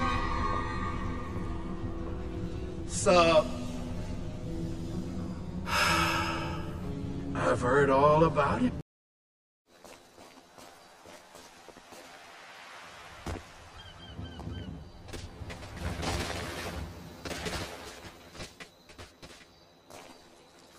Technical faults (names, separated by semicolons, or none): channel delay (comb filtering)